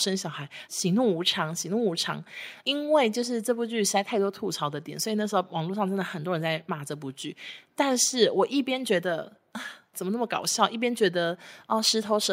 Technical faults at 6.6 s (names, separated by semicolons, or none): none